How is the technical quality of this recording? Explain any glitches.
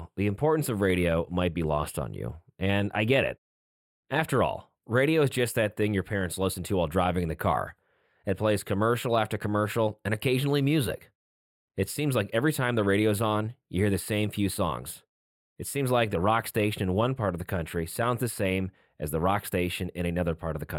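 The recording has one persistent fault: channel delay (comb filtering), present for the whole duration of the speech. One channel arrives a tiny fraction of a millisecond behind the other, which fits an offset of only a few samples, and the two are folded to mono. Content shared by both channels cancels where the offset equals half a cycle, putting the first notch around 7 kHz. The upper speech range sounds dulled and phasey, with sibilance and consonant detail thinned.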